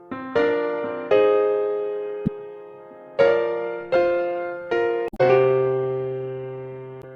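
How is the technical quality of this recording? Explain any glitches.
The recording has three short glitches, all from damaged data in a compressed stream, at 2.24–2.28 s, 5.06–5.21 s and 6.99–7.04 s. Corrupted bytes make the decoder misread frames and lose sync, producing brief chirps, squawks, clicks or short holes. On a spectrogram these show as smeared broadband blocks; on the waveform, as abrupt discontinuities.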